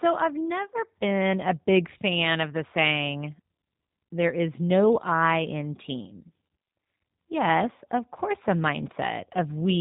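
Throughout the speech, G.729 codec damage is plainly audible. The voice is rebuilt from a vocal tract filter, a pitch predictor and sparse pulses, which fits an 8 kbit/s G.729A stream. It sounds rough and synthetic. On a spectrogram, energy stops sharply at 3.8 kHz, with blurred harmonics below.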